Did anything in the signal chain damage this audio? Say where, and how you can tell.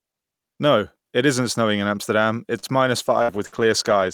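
Yes. In the network and jitter-buffer stage, a short stall from a late packet occurs between 2.59 and 2.66 s. A packet missed its playout time, the buffer ran dry, and the receiver held the last sound for about 31 ms until the packet arrived. Playback then resumed from the same point, so nothing is lost, but that moment is audibly drawn out with a slight buzz or dip, and the delay afterwards is 31 ms longer.

A call bitrate drop begins at 3.01 s, just after "it is minus", and lasts to the end. The bandwidth estimate fell, and the call's rate control told the Opus encoder to go from 64 to 19 kbps. With so few bits the codec quantises coarsely and trims the upper frequencies. From that point the sound goes rough, watery or muffled, and never recovers before the audio ends.

There are two bursts of packet loss, also after "it is minus", inside that low-bitrate stretch: 3.22 to 3.31 s and 3.46 to 3.55 s. 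Each time packets never arrived in time and about 60 ms of audio was lost. The receiver extended the last sound for roughly 57 to 59 ms and faded it down, producing a held buzz or decaying hiss, then jumped ahead with the intervening audio gone.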